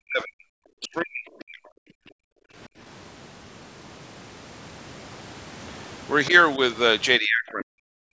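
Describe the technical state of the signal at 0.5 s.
At 0.5 s the speech is just recovering from speech suppressed in double talk, which runs from 0.0 to 0.47 s. The voice is pushed down by around 40 dB, likely because an echo canceller mistook it for loudspeaker echo while the far side was also talking. On a waveform the envelope collapses to near-flat before the level returns. On a spectrogram the energy, which tops out at 8 kHz, thins to faint smears and then fills back in.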